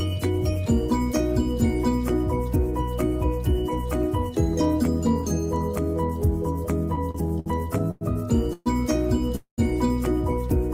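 From 6.95 to 8.03 s there are repeated stalls, a stutter. The sound halts six times, and the longest halt is about 0.1 s. The gaps are filled by continuing the last sound, 234 ms in all. Nothing is lost, but the audio drags.

At 8.53 s a call audio freeze begins. The last sound carries on for 127 ms, fading, with 10 ms of silence, and then the audio resumes where it stopped. At 9.36 s a second freeze fills 222 ms, 110 ms of it silent. Both likely come from packets held up until the jitter buffer ran empty.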